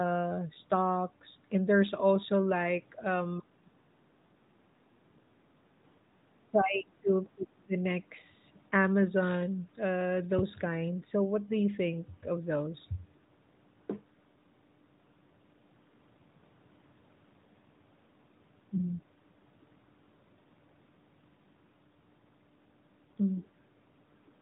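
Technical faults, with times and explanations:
3.4–3.7 s, 6.45–7.11 s and 7.35–7.76 s, speech suppressed in double talk: the voice sinks sharply for about 0.3 s, then 0.66 s, then 0.41 s, falling by roughly 25 to 30 dB at its deepest. The likely cause is an echo canceller that heard both ends at once, mistook the near talker for loudspeaker echo and turned everything down. On a spectrogram, the speech energy below the 3.8 kHz narrowband ceiling fades to faint traces in those windows. The waveform envelope pinches in.
4.41–4.52 s, background gated by the echo canceller: for about 110 ms the room noise between sounds drops by about 9 dB and then returns. The canceller clamped the microphone while the loudspeaker played and released it once playback stopped. The result is a brief hollow gap in the ambience. A spectrogram shows a narrow vertical strip where the noise floor thins evenly across the band. 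In the waveform, the low-level hiss visibly shrinks in height for that instant.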